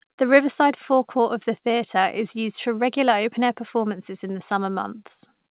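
No faults found in the speech; it sits on a call path using G.711 mu-law at 64 kbps, so the band stops at 4 kHz with the codec's ordinary coding noise underneath.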